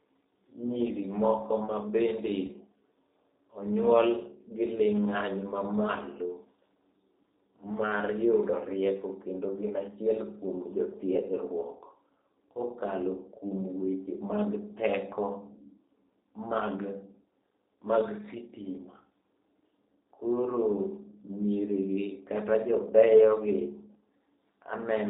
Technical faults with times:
0.00-25.09 G.729 codec
2.46-2.50 VoIP packet loss concealed by the speech codec

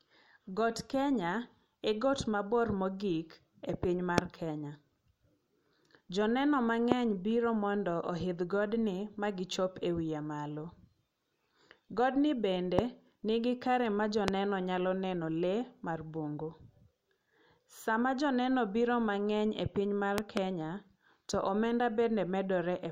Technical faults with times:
4.18-4.20 loud pop
6.92-6.94 loud pop
12.79-12.81 loud pop
14.28-14.30 loud pop
20.18-20.39 loud pop

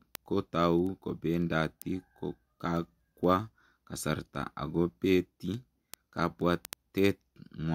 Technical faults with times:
0.15-7.68 word clock ticks

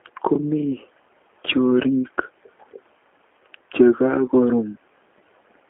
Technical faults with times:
0.00-5.69 G.729 codec

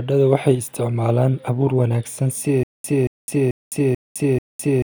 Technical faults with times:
2.63-4.91 stutter with silent gaps

